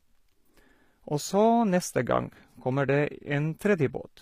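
Throughout the speech, s sounds come out gritty and metallic while the treble stays bright rather than dull, which points to a low bitrate near 24 kbps and likely HE-AAC compression: the upper band is rebuilt from copied lower bands, unlike a plain low-pass codec, which would simply muffle it.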